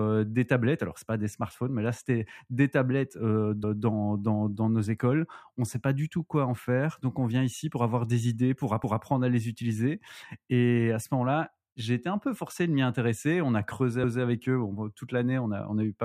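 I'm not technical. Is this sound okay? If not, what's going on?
No. There is one glitch, at about 8.84 to 9.04 seconds. Right after "avoir des idées pour", a fifth of a second of speech plays twice before "à les utiliser" continues. It sounds like a small stutter or skip. This is a fault called overlapping chunks. The audio was handled in pieces of about 5 seconds. At this join, the new piece started slightly before the old one ended, so the shared bit was heard twice.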